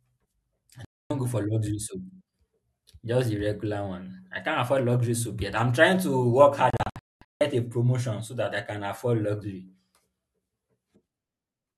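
Digital broadcast dropout occurs first from 0.85 to 1.11 s, just before "go for luxury soap": the speech mutes abruptly for about 0.26 s, which fits eight lost 32 ms frames. The receiver stopped getting valid frames and muted until clean ones arrived. The second dropout, from 6.70 to 7.41 s between "I'm trying to work" and "a promotion so that", breaks into several short holes totalling 0.54 s, the longest 0.22 s. That speech is simply gone.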